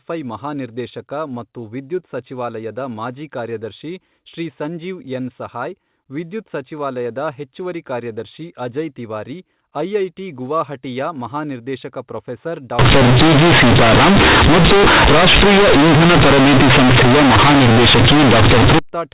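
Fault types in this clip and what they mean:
Companded audio read as linear: from 12.79 s to 18.79 s the speech turns into a loud, harsh buzz because mu-law bytes are being played straight as linear 8-bit samples, with no expansion back out. Each sign flip swings the waveform across roughly half its range, so quiet bits come out as big as loud ones and the pauses fill with heavy noise, far rougher than the narrow mu-law telephone band heard before it.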